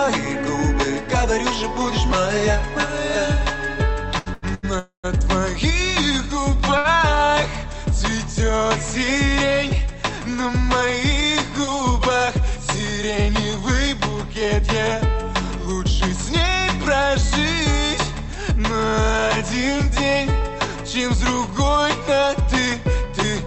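From 4.13 to 4.65 s there's a stutter of repeated stalls: packets kept arriving late, so the receiver stretched the sound four times, the longest gap 85 ms, filling about half that span.

Right after, from 4.79 to 5.06 s, comes a call audio freeze: the sound is held and fades, with about 110 ms going silent. It was likely packets held up in transit, and nothing is lost, just a quarter-second gap inserted.

At 6.78 to 6.86 s a short stall from a late packet holds one sound 69 ms too long, with a slight buzz or dip before it carries on from the same spot.

Finally, from 19.67 s to 23.43 s, a jitter buffer speed-up trims tiny pitch-period slices to shed roughly 150 ms of backlog, so the sound runs about 3% fast at unchanged pitch. Underneath it all, the Opus call path keeps its usual coding noise and cuts the top end at 8 kHz.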